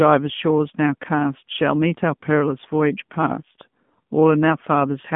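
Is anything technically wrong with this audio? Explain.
Yes. For the whole clip the speech has passed through the AMR narrowband mobile codec (AMR-NB). The signal was carried at an 8 kHz sample rate and rebuilt from a vocal-tract model fed by a few pulses per subframe. The plainly audible coding damage fits a low mode of about 7.4 kbps. Only about 150 Hz to 3.4 kHz survives, with nothing above 3.6 kHz, so the speech sounds thin and boxed-in. The voice also takes on a buzzy, synthetic edge.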